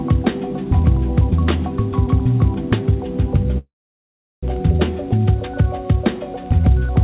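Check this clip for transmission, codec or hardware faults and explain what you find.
One transmission fault stands out, a call audio freeze, heard over a band that stops at 4 kHz, which fits G.711 A-law at 64 kbps.

From 3.58 to 4.45 s the sound stalls for about 0.85 s, likely because delayed packets drained the jitter buffer. The last sound is briefly extended, then about 0.74 s of silence follows before playback resumes where it stopped, with nothing lost. The waveform shows a flat gap, and the spectrogram shows a blank column.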